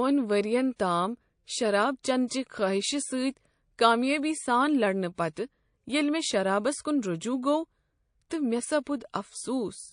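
MP3 compression runs through the whole speech clip, and its damage is plainly audible. The sound is likely the result of encoding at a low bitrate, roughly what 40 kbps would give. With too few bits, the encoder drops weaker frequency lines. Those lines switch on and off from frame to frame, which leaves a watery, swirling texture and softens the edges of consonant attacks.

Pre-echo appears at 0.76 to 0.79 s, just before "تام شراب چینہٕ چہ", and again at 2.28 to 2.31 s, between "ؤرین تام شراب چینہٕ" and "چہ خٲہشہ". Later instances fall at 5.15 to 5.18 s, 5.33 to 5.37 s and 8.83 to 8.87 s. Each time, a 29 to 35 ms smear of hiss, about 15 to 23 dB above the surrounding quiet, leads a sharp onset. This fits noise being spread across a 52 ms transform window without switching to short blocks.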